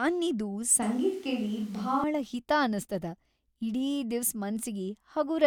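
At 0.82 s the speech suddenly turns roomy and hollow, with thinner bass. The cause is likely a switch to a distant microphone. The level barely changes, but room noise rises to around 30 dB below the speech. The close sound returns abruptly at 2.04 s, before "ಹಿತಾ ಅನಸ್ತದ".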